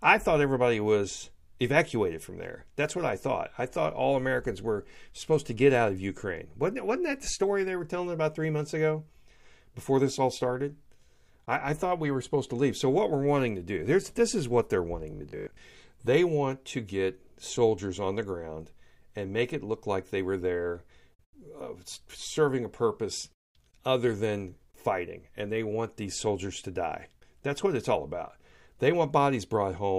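From 15.11 to 15.61 s the speech takes on a robotic sound from repeated short buffers: a rigid, metallic buzz with a fixed pitch near 50 Hz that still loosely tracks the talker. That pitch points to a segment of about 20 ms being replayed over and over, most likely because new audio arrived too slowly and the playback side filled the gap by looping what it last had. Across most of this half-second the real audio is skipped.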